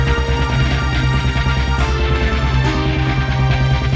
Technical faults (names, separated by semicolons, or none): none